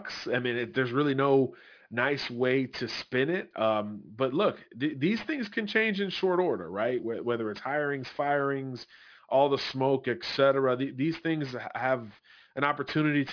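Throughout, the sound was downsampled without an anti-aliasing filter, which points to a drop from 44.1 kHz to about 11 kHz. Energy above the 5.5 kHz fold point mirrors back as aliasing, roughly 20 dB under the speech, making sibilants gritty and metallic.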